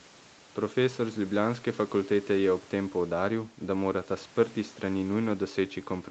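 No technical faults can be heard in this speech clip.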